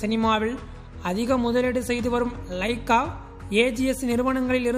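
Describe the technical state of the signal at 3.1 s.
At 3.1 s the signal is intact, with no dropout, clipping, distortion or other fault audible at that point.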